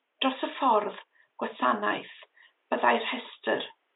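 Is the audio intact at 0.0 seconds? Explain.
Yes, the speech is intact at 0.0 seconds, with only the room's own background noise sitting about 49 dB below the speech.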